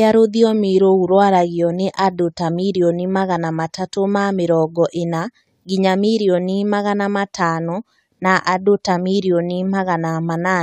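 No technical faults can be heard anywhere in the speech recording. Nothing in the signal chain draws attention to itself at any point.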